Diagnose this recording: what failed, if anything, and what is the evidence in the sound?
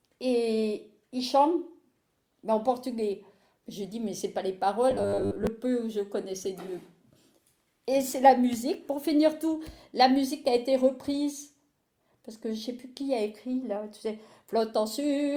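Robotic sound from repeated short buffers appears between 4.91 and 5.47 s, where the audio collapses into a rigid, metallic buzz pitched at 100 Hz. The stage is most likely the driver or playback buffer: fresh audio stopped arriving on time, so the same short block, about 10 ms long to match the 100 Hz buzz, was played over and over while roughly half of the real material in that stretch was skipped.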